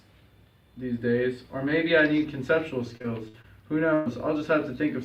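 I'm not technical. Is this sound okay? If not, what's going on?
No. There are two related faults, both caused by pieces of the audio going missing on their way to you.

From 2.97 to 3.46 s there is repeated packet loss, which gives a robotic sound. Four short chunks failed to arrive, the longest about 56 ms. Each time, the receiver papered over the hole by stretching out the sound it had just played. About a quarter of that half-second is filled this way, so the sound turns choppy and mechanical, with small pieces missing.

At 3.94 to 4.08 s there is a burst of packet loss: one continuous stretch of about 120 ms never arrived. The receiver again kept repeating the last sound and let it fade as the gap went on, so you hear a brief held buzz or fading hiss instead of what should be there. The audio then picks up again after it, and whatever fell inside that 120 ms is gone.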